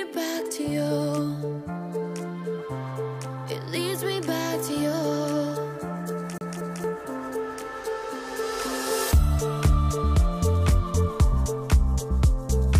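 From 6.38 to 6.84 s the CD sticks on one turn: a 230 ms stretch repeats twice as the laser jumps back, giving a fast, even stutter with brief mutes.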